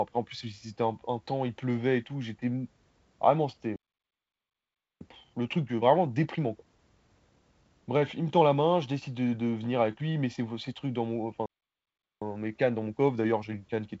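At 3.76 s the speech cuts out in a playback stall. Silence lasts about 1.25 s, until 5.01 s. The player likely ran dry of data or its thread was blocked. From 5.01 s to 8.01 s comes time-compressed catch-up. Small pieces are cut and cross-faded to clear the backlog. The speech runs about 1.15 times fast at normal pitch. A second stall starts at 11.46 s. This one is shorter, about 0.75 s, and is likely from the same starvation. Catch-up follows from 12.22 s to the end, at about 1.1 times speed. It sounds hurried but unshifted in pitch. Through all of this the wideband band-limit stays audible, with nothing above about 7.8 kHz.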